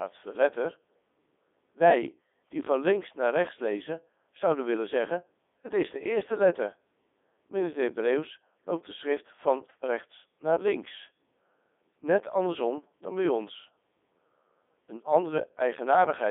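From start to finish the speech is run through a Codec 2 vocoder, and it's heavily mangled. Only pitch, voicing, energy and a rough spectral shape survive. The voice is rebuilt from sine waves, so it comes out robotic and buzzy, squeezed into roughly 250 Hz to 3.6 kHz. That fits Codec 2's top 3.2 kbit/s mode.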